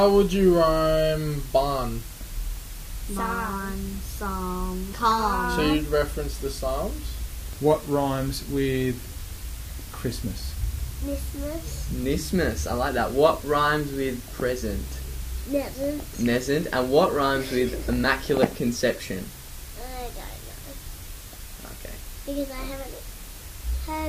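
From the first moment to the last, the audio carries low bit depth with dither: the signal has been reduced to about 7 bits, and random dither added before rounding turns the quantisation error into a steady hiss sitting only around 15 dB below the sound. It is heard as constant, even white noise rather than gritty distortion. A spectrogram shows a uniform grey floor across all frequencies, and the waveform's quiet stretches never fall to silence but stay fuzzy.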